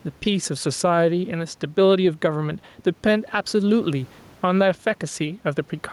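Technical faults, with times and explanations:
Throughout, gain pumping: room noise about 37 dB below the speech swells in each pause and ducks under every loud syllable, a swing of around 5 dB that squashes the dynamics. Likely cause: input gain set too high, with a fast limiter clamping each peak.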